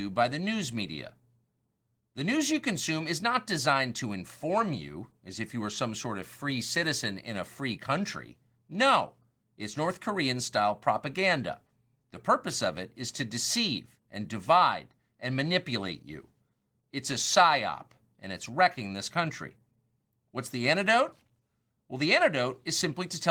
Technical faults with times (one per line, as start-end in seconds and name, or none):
none